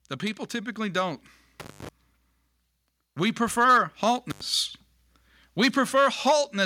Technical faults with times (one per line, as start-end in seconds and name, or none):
0.19-1.29 automatic gain rising
1.60-1.89 intermittent contact
4.30-4.41 intermittent contact